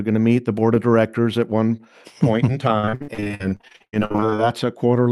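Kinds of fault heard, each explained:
Repeated packet loss (robotic sound): right after "point in", from 2.79 to 4.40 s, the sound keeps dropping out in short holes, up to 70 ms each. Each one is patched by stretching the last sound, so about half that stretch is filler, choppy and robotic.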